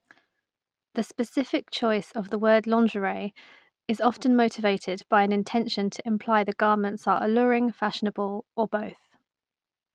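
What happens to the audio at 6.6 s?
Nothing goes wrong at 6.6 s: the speech carries on intact through that moment, with no dropout, click, distortion or other fault to be heard.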